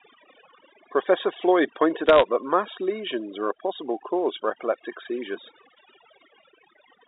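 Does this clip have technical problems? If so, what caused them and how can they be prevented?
Yes, two problems. The first is overdone noise removal, and it runs the whole length of the speech. The noise reducer was set too hard, so any frequency band sitting near its noise estimate gets pushed way down or switched off, and the softer parts of the voice go with it. You get a background that drops away and breaks up into twinkly little specks. Back the reduction amount off, or better, record with less noise so the tool barely has to work.

The second is bit errors on a digital phone line, heard as a burst of crackle from about 2.06 to 2.22 s. Each flipped bit on the line corrupts one sample, and when it lands on the sign or a high-order bit you get a sharp tick. At an error rate of a fraction of a percent they pile up into crackle sitting on top of otherwise intact speech. The G.711 telephone coding itself is fine, with the usual 300 Hz to 3.7 kHz phone band. 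Fix the line or transmission path causing the errors, or use a link with error protection.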